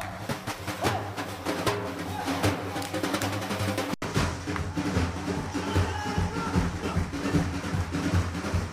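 At 3.94 s the sound abruptly freezes into a flat, silent stretch, then resumes at 4.02 s. This is an underrun with held sample: the output buffer emptied, and for 80 ms the converter simply held its last value. When data returned, roughly 70 ms of live audio had been skipped, so the waveform jumps to a new point.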